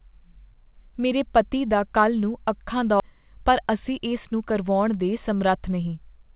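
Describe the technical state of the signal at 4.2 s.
At 4.2 s the speech is inside a jitter buffer speed-up running from 3.10 to 4.63 s. The receiver drains excess buffered delay by cutting short pitch-period segments repeatedly, about a tenth of a second in total, so playback runs at 106% speed with unchanged pitch and sounds slightly hurried.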